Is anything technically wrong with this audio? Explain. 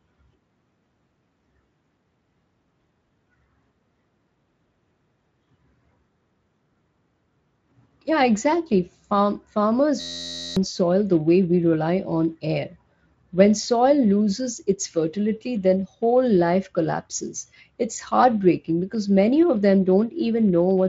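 Yes, there's a system hang loop from 10.01 to 10.57 s. Something froze while the sound hardware kept replaying the same tiny chunk of its ring buffer. The chunk is 11.6 ms long, which fits a 512-sample buffer, and it repeats around 48 times. So instead of speech you get a steady buzz at 86.1 Hz, and about half a second of the real audio is simply gone. The Speex coding around it adds only light, slightly noisy colouring.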